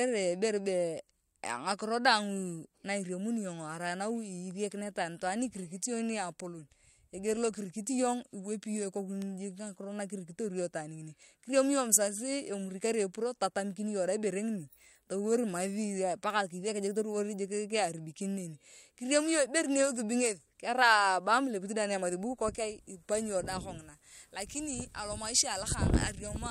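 At 9.22 s there's a bit error spike, a single sharp tick peaking around -25 dBFS that has nothing to do with the speech around it. A flipped bit made the sample value leap by a power of two and snap straight back. This one sounds like it spans a few consecutive samples. Another lands at 16.30 s, consistent with just one corrupted sample, heard as the same broadband click.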